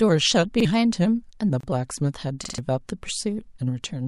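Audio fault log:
1.61–1.63 s, gap at a join of encoded pieces: a 28 ms silence cuts into continuous speech, where encoder start delay and end padding were left in at the join.
2.44–2.58 s, repeated buffer: the same 46 ms piece sounds three extra times with hard joins, which fits a 2048-sample buffer replayed while new audio ran late.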